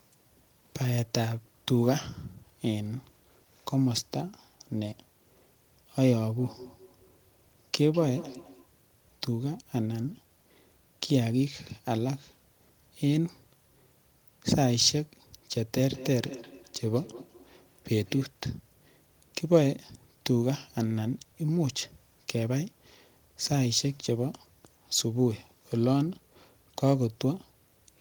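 Feedback echo between two devices appears from 6.39 to 8.71 s and again from 15.86 to 18.32 s. Two devices in the same room share the call. One plays back what the other's microphone sent, and that microphone picks it up again. Each device's echo canceller only removes its own playback. The speech returns about every fifth of a second, thinner and more ringing. The loudest repeat sits about 18 dB below the speech in the first stretch and about 16 dB below in the second.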